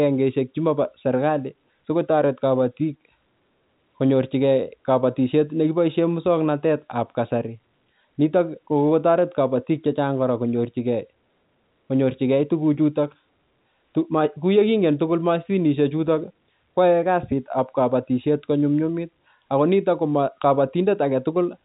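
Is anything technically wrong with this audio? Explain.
No, nothing here is technically wrong: it's telephone-band speech carried over ordinary G.711 A-law coding at 64 kbps, so the top end stops around 3.8 kHz just as a phone line's should.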